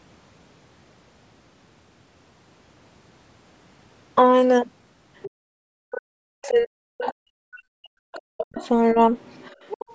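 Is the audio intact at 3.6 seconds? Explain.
Yes, the speech is intact at 3.6 seconds, passing cleanly through the call's microphone processing, whose bandwidth tops out at 8 kHz as expected for this path.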